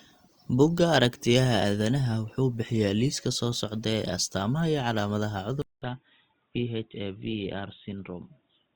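At 5.62 s the speech drops out for about 200 ms, then returns dull and boxy, with everything above 3.8 kHz gone and the level roughly 5 dB lower. A faint new noise floor, around 50 dB below the speech, sits underneath until the end. The likely cause is the input switched to a poorer device mid-recording. On a spectrogram the upper band cuts off sharply at 5.62 s after a brief blank gap, and the waveform shrinks slightly from that point.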